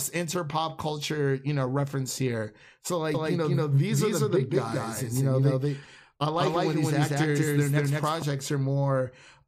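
Speech, and from 3.14 s, right after "know reference here so", every sound is heard twice, the second copy arriving about a fifth of a second later at roughly equal loudness, dry and full-band, cutting in and out abruptly until 8.22 s. This doubled audio track is likely a second capture through a slower path.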